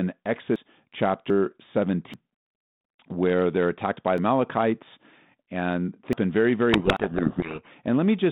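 Six times in this speech recording, the audio jumps ahead, at 0.56, 1.3, 2.14, 4.18, 6.13 and 6.97 s. The likely cause is a dropped buffer (overrun): the capture software fell behind, the hardware overwrote samples before they were read, and the audio on either side of the gap was butted together. No silence marks the joins. Instead there is a jump in the sound, with roughly a third of a second missing at 0.56, 2.14 and 6.13 s and about a tenth of a second at the other three. From 6.73 to 7.72 s there is a codec payload misread. The sending and receiving ends disagree on the bit order of the G.726 code words, so the decoder turns well-formed but scrambled codes into samples. For that second the speech is buried under harsh, grinding distortion, and the 6.97 s skip falls inside it. The distortion stops once both ends agree again. It sits on top of a telephone-band G.726 link at 32 kbit/s that passes roughly 150 Hz to 3.7 kHz.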